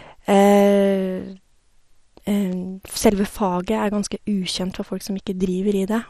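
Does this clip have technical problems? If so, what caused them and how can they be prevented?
Yes. Throughout the speech there is plainly audible MP2 compression damage: the sound is dull, with nothing above 14.3 kHz, and carries a gurgling, granular texture. This is likely the result of MPEG Layer II coding at a low rate, which fits roughly 64 kbps. With that few bits the encoder shuts off the upper sub-bands, lets others drop in and out, and quantises what remains coarsely. To prevent it, encode at a higher bitrate or use a more efficient codec.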